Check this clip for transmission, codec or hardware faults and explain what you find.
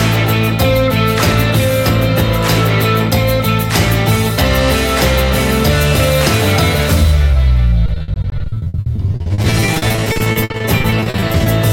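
One transmission fault is present. From 7.86 to 11.48 s there is repeated packet loss (robotic sound): dozens of short dropouts, none longer than 60 ms, each patched by extending the preceding audio. About 40% of that stretch, roughly 1.4 s, is concealed, giving a choppy sound with pieces missing.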